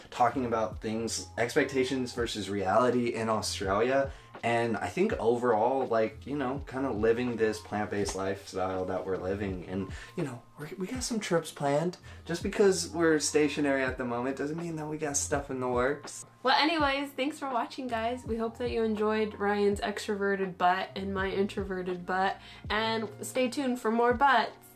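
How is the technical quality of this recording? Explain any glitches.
No glitches to report here; nothing in the recording stumbles, drops out or breaks up at any point.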